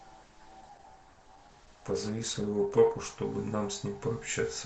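From the start of this speech clip up to about 3.16 s, you're hearing an adaptive stream starting at a low bitrate. The player opened on a thin, cheap version to get going fast, and the dull top end, fake-sounding sibilance and heavier smearing fit something like Opus around 16 kbit/s. Once it had sized up the connection, it jumped to a better stream, probably near 64 kbit/s, and the treble snaps back in with no gap.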